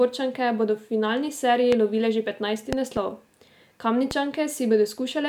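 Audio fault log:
1.72–1.75 s, 2.73–2.99 s, 4.11–4.13 s: loud pop. Single sharp thumps at 1.72 s and 4.11 s and a pair in quick succession between 2.73 and 2.99 s, each peaking at about 15 dB over the speech. These are likely sudden voltage steps from a switch, plug contact or static, which later circuits round into a short pulse. The speech carries on unbroken beneath each one, which separates them from dropout clicks, where the sound itself cuts out.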